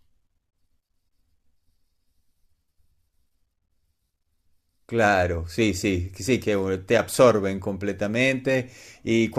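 No technical faults can be heard anywhere in this recording.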